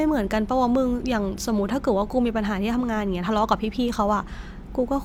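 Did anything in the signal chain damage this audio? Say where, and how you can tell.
No, nothing in the signal chain has damaged this speech recording. No stage from capture through to playback leaves an audible mark on the sound at any point.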